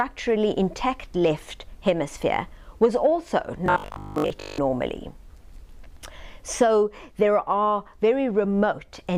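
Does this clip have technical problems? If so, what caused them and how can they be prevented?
Yes. From 3.66 to 4.58 s there is robotic sound from repeated short buffers. The likely cause is fresh audio arriving too slowly, so the playback software kept looping the last 20 ms chunk while the real material was skipped. For most of that stretch the loop imposes a fixed 50 Hz buzz, one over the 20 ms repeat length, and the sound turns rigid and metallic while loosely following its original shape. Giving the audio path a larger jitter buffer or more processing headroom would keep new audio arriving on time.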